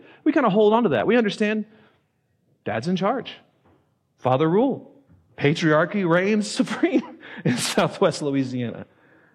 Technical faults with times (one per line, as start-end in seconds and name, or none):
4.26-4.34 hard clipping
6.13-6.18 hard clipping
7.78-8.06 hard clipping